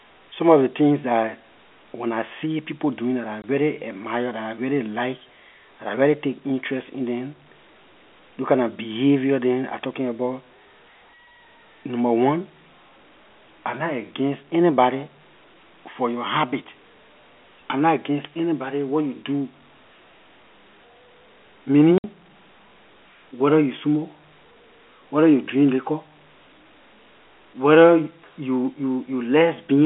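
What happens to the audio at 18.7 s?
At 18.7 s a loudspeaker feedback squeal is sounding, from 17.93 to 19.22 s, just after "I nah". The microphone re-amplifies its own loudspeaker, and a 5 kHz tone swells over roughly 0.7 s to a few dB above the speech. Unlike a steady interference whistle, it grows from nothing before cutting off.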